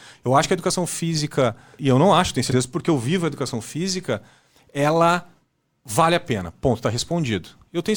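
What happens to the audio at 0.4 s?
A brief skip between 0.43 and 0.48 s, just before "que a educação física": compressed frames skipped, with roughly one 20 ms frame dropped so the speech jumps ahead.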